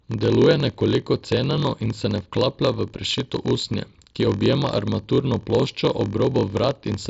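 A block size mismatch (padded) runs through the whole speech clip, from start to finish. One stage delivers blocks slightly shorter than the next stage expects, and the shortfall in each block is filled with silence. These tiny regular gaps produce a steady buzz at about 43.1 Hz, which fits a 1024-sample read block. The speech plays at 0.938 times normal speed, slightly drawn out but near its usual pitch, heard through the mSBC headset codec's band limit around 7.7 kHz.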